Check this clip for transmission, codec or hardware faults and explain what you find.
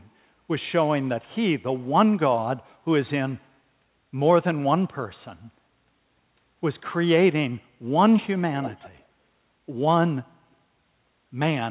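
One fault is audible. Echo leak, 8.62 to 9.04 s: a faint copy of the speech trails it by 132 ms at about 15 dB below, likely loudspeaker sound the far end's echo canceller failed to remove before sending it back.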